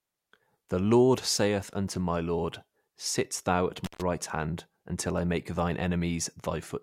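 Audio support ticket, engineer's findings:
Speech dropout with crackle at both edges, 3.84 to 4.02 s. Signal gone for about 134 ms, faint hiss only in the gap. Intermittent contact: loose cable or plug briefly opening the line. Crackle from the contact breaking and remaking, hiss from the open input. Check connector seating and cable strain relief.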